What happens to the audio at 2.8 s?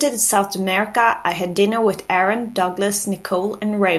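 At 2.8 s you're hearing the same mains buzz that runs under the whole clip, not anything new at that moment. It's a 50 Hz hum with a raspy edge, sitting roughly 35 dB below the speech. Something like a dimmer, a rectifier or a missing shield is letting sharp switching spikes in twice per mains cycle. Those spikes spread harmonics of 50 Hz up into the kilohertz range, which gives the buzz its gritty texture.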